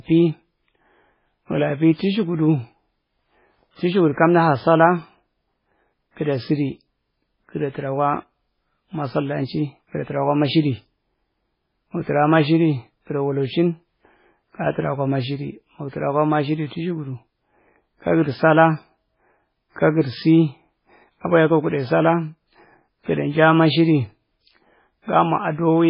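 MP3 compression throughout, likely at about 16 kbps: treble stops at 5.3 kHz, and flickering weak frequency bands leave the speech heavily watery and swirly.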